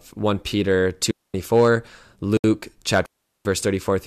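It's a speech clip with two digital wireless dropouts, at 1.11 to 1.34 s and 3.06 to 3.45 s, where the receiver mutes cleanly for about 230 and 390 ms with no noise bursts. There's also a 69 ms gap at a join of encoded pieces at 2.37 s, leftover encoder delay and padding that opens a silence with smeared edges before the sound picks up where it stopped.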